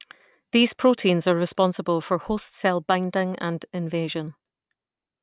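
Speech recording, with no technical fault to be heard anywhere in it. Nothing in the sound calls for a time or a cause.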